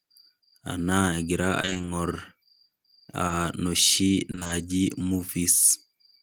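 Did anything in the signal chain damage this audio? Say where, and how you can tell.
Yes. Repeated packet loss (robotic sound) at 1.61–1.89 s and 4.31–4.51 s points to the network stage. Holes of up to 20 ms recur so closely that half of each stretch, 140 ms and then 100 ms, is concealment that extends the preceding speech. The result is choppy speech with pieces missing.

Short concealed packet loss at 3.27–3.31 s is also a network fault. About 20 ms of speech never reached the decoder in time, so the receiver continued the previous sound and blended it back into the real audio. It is heard as a brief smear or wobble.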